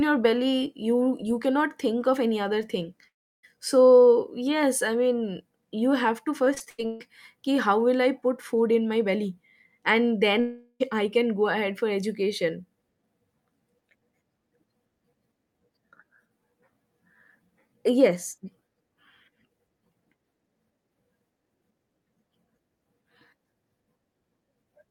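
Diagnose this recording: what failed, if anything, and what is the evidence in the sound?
Long network dropout, with the network the likely cause: after "of any other thing" (3.07–3.45 s) and "in my belly and" (10.40–10.82 s), the sound trails off and resumes about 0.4 s later, missing that part.

Repeated packet loss (robotic sound) at the network stage, 6.45–7.02 s, after "mean you have to": several short holes, the longest 137 ms, are patched by continuing the last sound. This covers about half the span and gives choppy, robotic speech.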